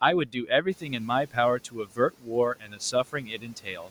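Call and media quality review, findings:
Noise suppressor misclassifying speech as noise, 0.26–0.91, 1.59–2.34, 2.56–2.95 and 3.13–3.89 s: speech cut by the noise suppressor, brief drops of about 11–12 dB, sounding swallowed and faint.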